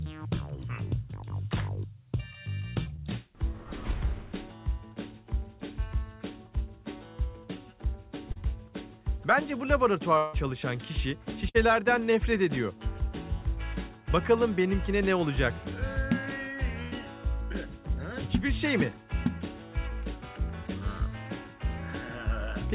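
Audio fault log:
2.96–3.00 s and 8.32–8.37 s, short concealed packet loss: about 20 ms of audio failed to arrive in time at the first point and about 40 ms at the second. The receiver covered each hole by extending the preceding sound for roughly 17 ms and 37 ms, then blended back into the real signal. Each one comes across as a small smear or wobble.
10.17–10.35 s, long network dropout: roughly 160 ms of audio is missing, and the gap is filled almost entirely, about 155 ms, with a continuation of the last sound that fades as it goes on, with no stretch of outright silence. The cause is likely a stall in arriving packets, after which playback resumes further along without the lost portion.
11.49–11.56 s and 16.82–16.94 s, burst of packet loss: consecutive packets were lost, about 60 ms at the first point and about 100 ms at the second. Concealment stretched the last sound across about 55 ms and 92 ms, fading it as the gap went on, so it becomes a held buzz or a dying hiss. 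The audio then picks up again a little later, with the material in between missing.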